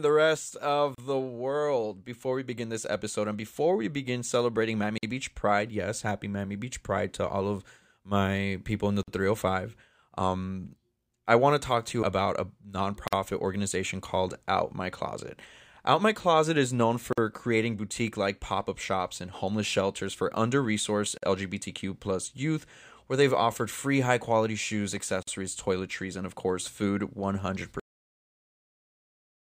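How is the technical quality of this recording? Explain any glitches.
The recording has two kinds of technical fault: repeated short dropouts at the joins between separately encoded pieces, and an ending that is cut off.

Gap at a join of encoded pieces, at 0.95, 4.98, 9.03, 13.08, 17.13, 21.18 and 25.23 s, roughly every 4 seconds. The speech appears to have been encoded in chunks and joined without trimming the encoder's start-up delay and final-frame padding. Each join leaves a brief hole in the speech, about 35 ms at the first and 49 ms at the rest. The edges are smeared by the codec, and the speech resumes exactly where it stopped.

Cut-off end at 27.80 s. The final buffers were never written, so the speech stops mid-sound and drops straight into digital silence with no natural decay. The silence runs to the end of the file, leaving the last stretch of the recording empty rather than finishing the utterance.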